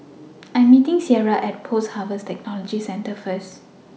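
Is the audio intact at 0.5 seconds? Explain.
Yes, the speech at 0.5 seconds plays through cleanly, with no dropout, click, distortion or other fault at that moment.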